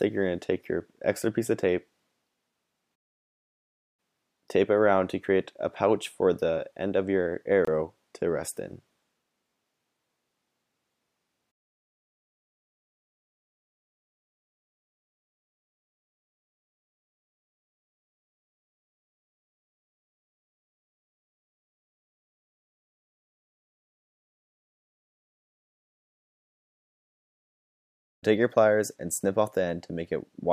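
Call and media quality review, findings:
Gap between chunks, 7.65–7.67 s: 25 ms hard-edged hole, vertical blank column on spectrogram, flat waveform; delayed chunk playout, consistent with 4 s chunking.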